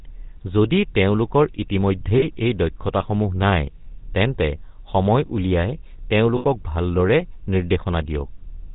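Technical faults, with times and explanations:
Throughout: GSM full-rate codec. A buzzy, gravelly roughness and nothing above 4 kHz, consistent with 13 kbps full-rate coding. This differs from plain band-limiting, which stays smooth rather than buzzy.
2.18–2.25 s, 3.84–3.87 s, 6.36–6.44 s: lost GSM frames, lasting 40, 20 and 80 ms. Each missing stretch is filled by repeating the last good frame, so it rings metallically instead of going silent.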